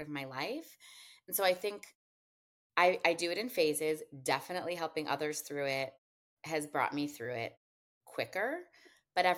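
Listening through this speech recording, nothing technical stood out as wrong.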